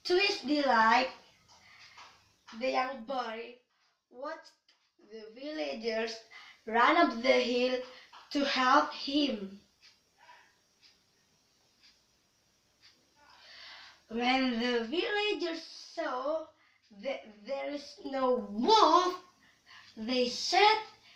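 Zipper noise at 2.32–3.62 s, 5.20–6.41 s, 14.49–15.88 s and 17.65–18.58 s. Each level move (down about 15 dB, up about 15 dB, down about 10 dB, up about 10 dB) happens in unsmoothed 2 dB jumps, a few to several per second. Every jump clicks, so a ticking rides on the sound.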